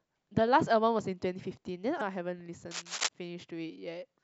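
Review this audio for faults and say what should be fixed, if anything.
Damaged data in the compressed stream at 1.97–2.02 s: the decoder loses frame sync and emits a brief glitch, seen as a broadband smear and a waveform discontinuity. Verify stream integrity with checksums and reliable transfer.

Cable scratch noise from 2.71 to 3.09 s: dense, uneven rustling bursts sit a little below the speech, likely from a worn connector, showing as ragged vertical streaks across the spectrogram. Replace or clean worn cables and secure connectors before recording.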